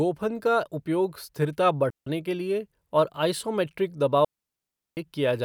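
At 1.90 s, right after "का उपयोग स्थिरता", the speech drops into a clean hole for about 0.16 s before picking up at "के लिए और". That's a digital wireless dropout: the link lost too much data and the receiver muted fast. A second, longer one runs from 4.25 to 4.97 s, about 0.72 s of near silence. Neither has any crackle or noise burst at the edges.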